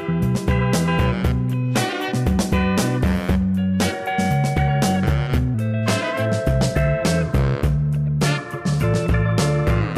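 A section at the wrong speed runs from the start to 5.54 s, likely because that stretch was played back or rendered against the wrong clock, running it 1.14 times faster than it was captured. Since speed and pitch are tied together here, the sound is both hurried and raised by about two semitones. At 5.54 s it drops abruptly back to its natural pace and pitch.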